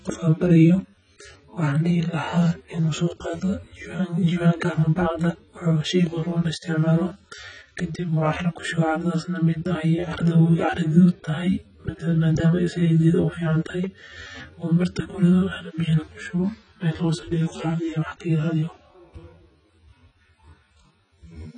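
From start to finish, the speech carries heavy AAC compression damage. Nothing sounds above 9.6 kHz. The likely cause is a coder starved of bits, which fits a rate near 16 kbps. The sound is dull. Sibilants turn fizzy and smeared, and sustained sounds warble.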